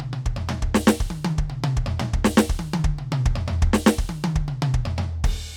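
Nothing in this bit of music stands out as a technical fault; it just runs along without a hitch.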